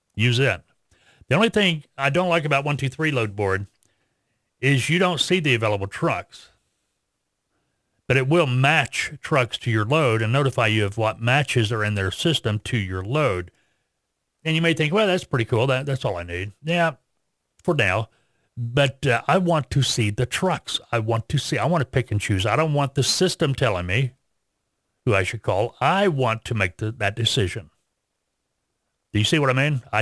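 This speech recording has aliasing from start to finish. The sibilants sound gritty and metallic. The spectrum runs hard up to a ceiling at 11 kHz. That edge fits a sample-rate drop from 48 kHz to 22 kHz with no low-pass filter applied first. Energy above 11 kHz could not be kept. It folded back below the edge at wrong, unrelated frequencies. The folded content sits roughly 25 dB below the speech.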